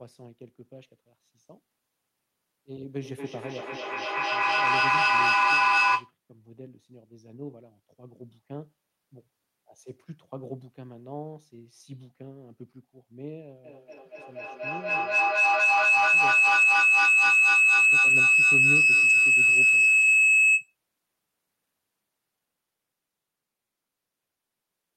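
Feedback echo between two devices runs from 3.0 to 6.16 s. A second device in the same room is playing back what this microphone sent, and the microphone captures it again. The echo canceller only removes sound from its own loudspeaker, so this loop passes through untouched. Each syllable returns about every fifth of a second, thinner and more ringing each time. The repeats stack up to about 16 dB above the speech rather than fading.

Feedback howl follows from 13.64 to 20.76 s. Here a microphone-to-loudspeaker loop adds level on every trip, so the returns grow instead of dying away. They narrow to the band the loop favours, becoming a piercing tone around 3 kHz. At its peak it sits about 18 dB above the speech, and it keeps sounding until the loop is broken at 20.76 s.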